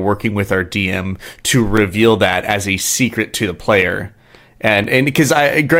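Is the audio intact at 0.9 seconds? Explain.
Yes, at 0.9 seconds the speech plays through intact, with no dropout, click, distortion or other fault to be heard at that moment.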